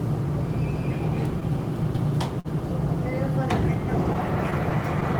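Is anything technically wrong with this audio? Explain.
Yes, there are three timing faults.

Throughout the clip there is clock drift between sender and receiver. The sender's clock runs roughly 3 percent slow, so the jitter buffer keeps draining and the receiver repeats short pieces to fill it. This causes small hiccups at uneven intervals.

From 2.39 to 2.48 s there is a short stall from a late packet. The buffer ran empty, and the receiver stretched the last sound by 51 ms until the packet arrived. Nothing is lost, but the sound hangs briefly with a slight buzz or dip, and everything afterwards lands 51 ms later.

Between 4.13 and 5.04 s there are scattered short gaps. Around four late packets left small holes, each patched by continuing the preceding sound. Together they total about 40 ms, the longest around 10 ms, and they are heard as brief ticks and smears.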